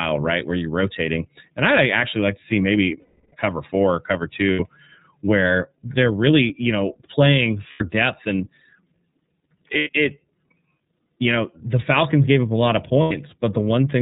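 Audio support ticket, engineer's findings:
Whole clip: band-limited, slightly rough, synthetic-sounding speech, nothing above 4 kHz, coding damage plainly audible. Component: iLBC codec, narrowband. Each frame's excitation coded on its own, losing fine detail and air. Roughness and frame-by-frame texture fit the 13.33 kbps mode with 30 ms frames.

Five dropouts filled by a held, faintly buzzy, breathy vowel. 3.0–3.35 s, 330 ms, longest, fading through the hold. 4.53–4.60 s, 60 ms, after "cover four or cover". 7.70–7.83 s, 90 ms, after "really you know playing". 9.77–9.89 s, 90 ms. 13.02–13.12 s, 90 ms, after "up a lot of". Component: lost iLBC frames, with the decoder repeating the last pitch cycle mixed with noise. Speech recovers immediately after each gap because iLBC frames decode independently.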